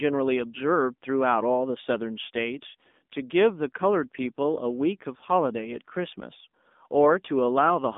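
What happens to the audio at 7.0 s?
At 7.0 s the speech carries the same AMR narrowband mobile codec damage heard across the whole clip. The line is confined to roughly 200 Hz to 3.6 kHz, with nothing above 3.7 kHz. The codec rebuilds the voice from a vocal-tract filter excited by a few pulses per 5 ms subframe, so the result sounds plainly buzzy and synthetic. That degree of damage fits a low mode around 7.4 kbps.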